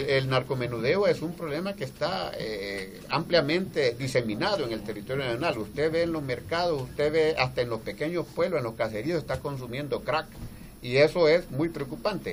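Nothing stood out as a technical fault on listening to the recording.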